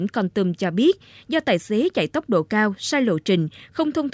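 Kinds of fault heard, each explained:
No faults turn up here at all; the speech just runs along with nothing odd to pick out.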